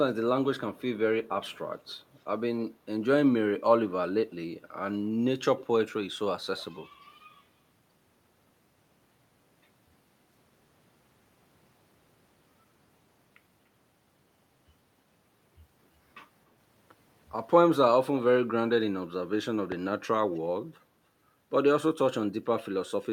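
A speech recording with two kinds of fault. The first is echo leak. A faint, delayed copy of the speech comes back in short scraps at 0.76 to 0.98 s, 1.45 to 1.58 s, 1.89 to 1.94 s, 5.59 to 5.63 s, 6.57 to 6.61 s and 20.35 to 20.40 s. Each copy trails the original by about 283 to 296 ms. It sits roughly 20 to 40 dB below the speech. The likely cause is a far end on a loudspeaker whose echo canceller let some of the returning sound through. The second is a loud pop from 19.72 to 19.74 s. It is a single sharp hit, roughly 10 dB above the surrounding sound, and the speech continues underneath. It likely comes from a sudden voltage step, such as a plug, a switch, static or a driver glitch.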